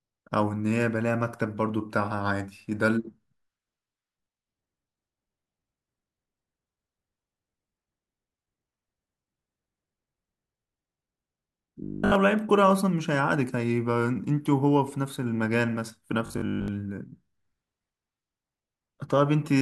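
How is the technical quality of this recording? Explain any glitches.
Two short glitches spoil this speech recording. Robotic sound from repeated short buffers appears at 11.84 to 12.16 s and again at 16.26 to 16.68 s. This is likely caused by a stalled audio stream, with the playback repeating a roughly 20 ms chunk instead of advancing. That repetition imposes a rigid 50 Hz metallic buzz, present throughout the first burst and through most of the second.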